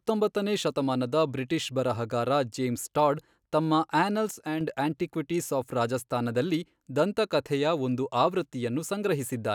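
At 4.31 s, right after "ಬರಹಗಾರ ಜೇಮ್ಸ್ ಟಾಡ್ ತಮ್ಮ", the speech and its background noise drop together by about 4 dB, holding until 4.61 s before "ಆಂಟಿಕ್ವಿಟೀಸ್ ಆಫ್ ರಾಜಸ್ಥಾನದಲ್ಲಿ ದಂತಕಥೆಯ". This sudden gain jump is likely a digital gain change applied between adjacent samples with no ramp.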